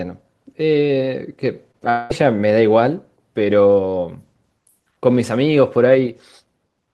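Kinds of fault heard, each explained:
Short concealed packet loss: at about 1.71 s roughly 20 ms of audio failed to arrive in time, and the receiver bridged the gap with about 23 ms of synthesized continuation before blending back into the real signal. It comes across as a brief smear or wobble rather than a gap. What separates it from a dropout is its brevity: the patch is too short to drift into a buzz or fade, so the sound barely stumbles.
Long network dropout: from about 1.90 s to 2.12 s the sound turns into a sustained artificial continuation of what came just before, a fading buzz or hiss lasting around 200 ms, with no stretch of silence, before real audio resumes further along. About 200 ms of the original never plays. The likely cause is a network outage long enough to exhaust concealment, unlike a short packet loss, whose patch is a momentary smear rather than an audible synthetic tail.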